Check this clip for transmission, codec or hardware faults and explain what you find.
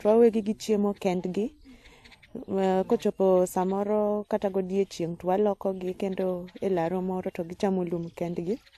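One codec fault runs through the whole clip. Transcoding between lossy codecs, throughout: the speech was likely encoded at a low AAC-type rate and then re-encoded in WMA, which wasted bits on the first set of artefacts. The sound shows both codecs' artefacts together, with nothing above 12.8 kHz.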